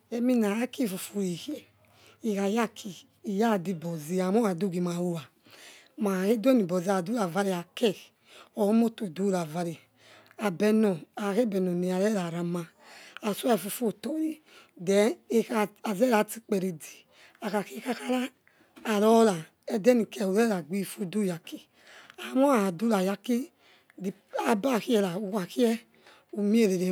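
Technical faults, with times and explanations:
No technical faults are audible anywhere in the recording, and the speech signal stays intact and stable throughout.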